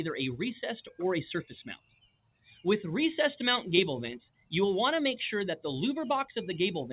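A noise suppressor applied to music or sounds runs across the whole clip. Tuned for speech, it treats held tones, ambience and decaying tails as noise, so the level pumps up and down by something like 15 dB: onsets come through, sustained parts sink and flutter. On a waveform the envelope bobs irregularly rather than decaying smoothly. On a spectrogram, energy after each attack thins and breaks into patches. Above all this, nothing shows beyond 4 kHz, which fits a G.711 mu-law call path at 64 kbps.

From 1.76 to 2.65 s there is sound cut by the noise suppressor, dropping by up to about 21 dB. The sound there sinks in level. The waveform shows a sudden hollow, and the spectrogram a faded block. A second, shorter cut from 4.3 to 4.52 s dips by about 20 dB.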